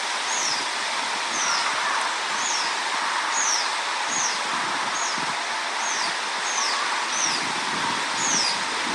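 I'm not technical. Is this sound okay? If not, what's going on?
No. Throughout the clip the sound has a breathy, grainy edge, and nothing is heard above about 11.6 kHz. That points to Bluetooth LC3 compression. Likely the wireless link squeezed the audio and dropped the top detail.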